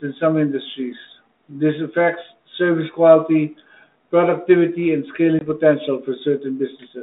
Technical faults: packet loss on an ADPCM call

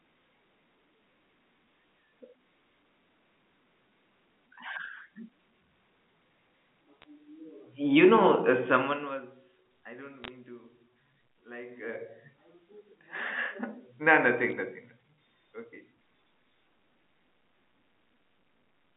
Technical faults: bit errors on a digital phone line; zipper noise

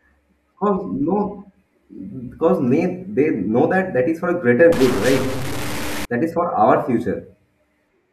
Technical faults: stuck bit

